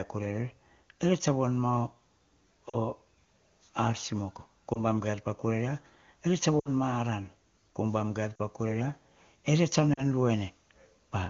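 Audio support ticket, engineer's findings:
Short dips and smeared warbles at 2.70–2.77 s, 4.73–4.80 s after "simoko ko", 6.59–6.69 s, 8.36–8.40 s after "umbam gaier", and 9.93–10.04 s. Cause: lost AMR speech frames. The decoder fills each gap of about 20–60 ms by repeating the last good pitch with fading gain, then recovers roughly. The HD Voice path sounds clean, consistent with a high AMR-WB rate.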